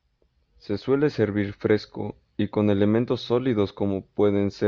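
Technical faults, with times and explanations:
No technical faults can be heard anywhere in this recording.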